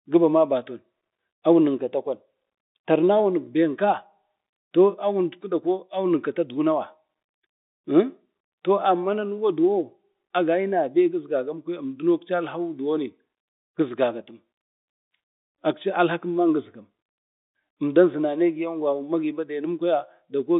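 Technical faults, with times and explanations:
No technical faults are present: the speech arrives as ordinary G.711 telephone coding, its sound confined to the line band of roughly 200 Hz to 3.7 kHz.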